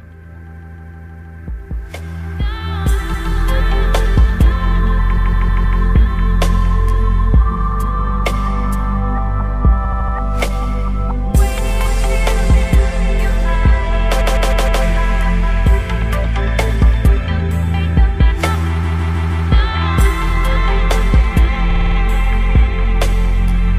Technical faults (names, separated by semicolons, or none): repeated frames